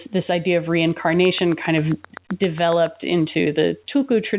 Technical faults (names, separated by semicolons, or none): train of clicks